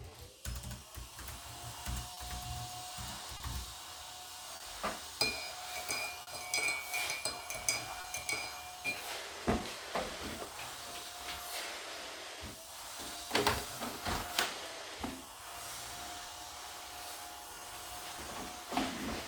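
Clock drift between sender and receiver runs through the whole recording. The sending clock is roughly 3 percent slow relative to the receiver, so the jitter buffer keeps draining. The result is a series of small, irregularly spaced timing hiccups in the sound from start to finish.

Short stalls from a late packet occur at 2.14, 3.37, 4.56, 6.22 and 8.01 s. Each time the buffer ran dry, the receiver held the last sound for 30, 30, 40, 50 and 30 ms respectively, then resumed where it left off. Nothing is lost, but each spot has a brief held sound with a slight buzz or dip.

Repeated timing corrections run from 8.47 s to 19.24 s. The receiver keeps repeating small pieces to make up for the slow sender, so playback runs at 98 percent speed and stretches the passage by about a third of a second. This shows up as faint, unevenly spaced hiccups and a slightly dragging tempo.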